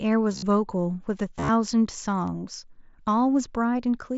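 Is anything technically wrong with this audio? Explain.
Yes. Concealed Bluetooth headset packet loss occurs from 0.32 to 0.43 s and from 1.37 to 1.49 s. Voice packets from the headset were dropped, and the receiver filled each gap by repeating the best-matching stretch of recent waveform. In the first burst about 75 ms goes missing across roughly 105 ms, with the longest run lasting 45 ms. In the second, about 83 ms goes missing across 120 ms, with runs up to 30 ms. These longer runs are heard as a buzzy, full-level held tone that warbles slightly as real sound resumes.

At 2.28 s there is a bit error spike. A single sample was corrupted by a flipped bit, so it jumped by a power of two and then returned, producing one sharp broadband tick unrelated to the surrounding sound. This is separate from the light grain that the mSBC wideband headset codec adds.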